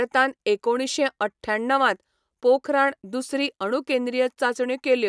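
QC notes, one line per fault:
No faults heard in this speech recording.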